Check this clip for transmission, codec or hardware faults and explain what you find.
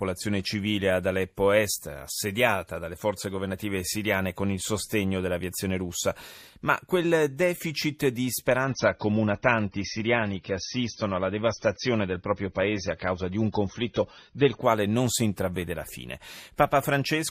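There's one fault here: a stretch of adaptive stream at a lower bitrate, from 8.64 s to 14.64 s. For those six seconds the player dropped to a cheaper version of the stream, which fits a step from around 96 kbit/s down to about 24 kbit/s AAC. At that rate the encoder sheds the top end, so nothing survives above 6.3 kHz. The speech turns dull and muffled, with more codec smear, and the quality switches abruptly both ways without any gap in the audio.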